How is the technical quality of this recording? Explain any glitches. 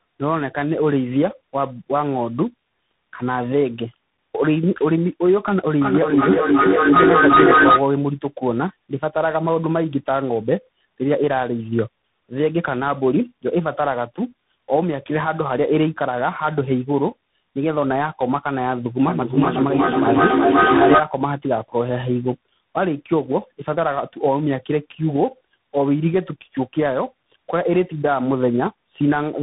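The recording has two problems: the speech is degraded by repeated coding throughout, and two bursts of runaway echo occur.

Tandem speech coding runs the whole length. The call appears to have crossed several links, each decoding and re-encoding the audio with its own coder. The sound points to three speech codecs in a row, ending in something like CVSD. Each stage adds its damage to what the last one left. The result is rough, muffled and warbly, with nothing above 3.8 kHz.

Feedback echo between two devices occurs from 5.81 to 7.91 s and again from 19.08 to 21.14 s. A second device in the same room plays the call back into the first device's microphone. That device's echo canceller cannot remove sound it did not play itself. The speech returns at a steady interval of roughly 0.4 s. The repeats build up instead of fading, peaking about 7 dB and then about 5 dB above the speech.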